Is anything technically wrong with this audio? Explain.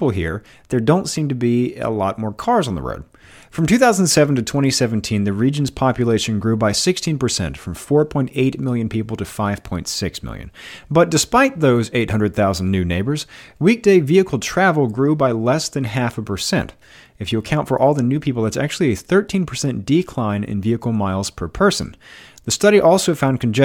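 No, nothing technically wrong can be heard in this speech recording.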